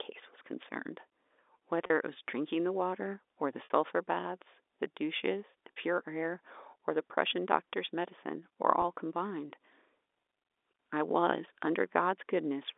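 A brief held, buzzy hum replaces the speech at 1.86–1.90 s, 3.64–3.70 s, 5.76 s and 8.82–8.84 s, as if a syllable froze on one pitch before the voice resumed. This is packet loss with pitch repetition. About 40, 60, 40 and 20 ms of audio went missing, which fits 20 ms packets, and the receiver bridged each gap by looping the last pitch period under the narrow G.711 telephone band.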